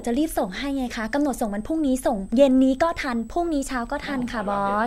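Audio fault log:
throughout, switching supply whistle: a switching power supply near the recording chain is cycling in an audible burst mode, or beating against another supply, and leaking its switching frequency into the signal. That leaves a thin, high whistle under the speech, wandering between about 7.82 and 8.30 kHz as the supply's load shifts, sitting roughly 35 dB below the speech level.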